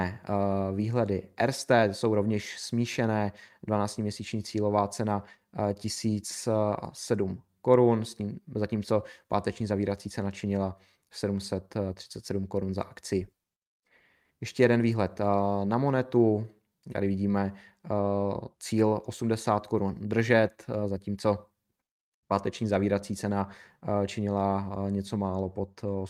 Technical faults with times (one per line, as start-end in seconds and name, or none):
0.00-26.09 clock drift between sender and receiver
0.03-26.04 repeated timing corrections